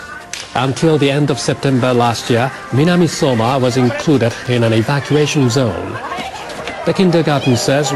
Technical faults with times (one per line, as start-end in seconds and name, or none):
4.01-5.23 train of clicks